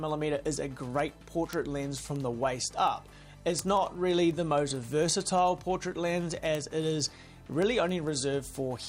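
From 0.19 s onward, word clock ticks sound about ten times a second: an unlocked receiver slips single samples, leaving evenly spaced vertical spectrogram lines.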